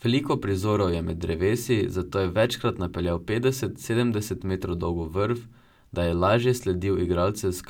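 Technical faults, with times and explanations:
No technical faults can be heard in the clip, so there are no times or explanations to give.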